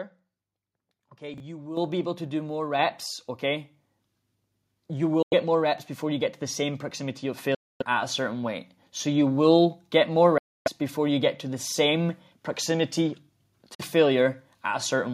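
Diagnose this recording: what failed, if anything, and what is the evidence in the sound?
Chunks out of order, at the driver or buffer stage: at 1.34–1.40 s and again at 11.66–11.72 s, a 20 ms block of audio plays two blocks later than it should. The result is a short jumbled blip. Nothing goes missing, but the sequence is reshuffled, leaving three hard joins. On the waveform these show as abrupt discontinuities. On a spectrogram they appear as thin vertical broadband lines bracketing a brief stretch where the harmonics jump.

Microphone volume stepped up, at the call-processing stage: the gain control raises the device's input level in single steps. The steps are about 9 dB at 1.77 s, just before "be able to do"; about 4 dB at 2.79 s, right after "able to do more"; about 2 dB at 6.36 s; and about 3 dB at 7.38 s. The voice and the background rise together. The waveform envelope steps up instantly, and the whole spectrogram, including the noise floor between syllables, brightens at once.

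Bluetooth dropout, likely on the wireless link to the headphones during playback: the output cuts to silence at 5.22–5.34 s (about 93 ms), at 7.55–7.83 s (about 255 ms, between "the same proximity of" and "at a certain weight"), at 10.38–10.68 s (about 279 ms), and at 13.75–13.81 s (about 46 ms). Each gap is a whole number of roughly 23 ms frames, which fits packets missing their delivery deadline. The sound resumes further along, as if it had kept playing. The waveform shows flat-line holes, and the spectrogram shows blank vertical bands.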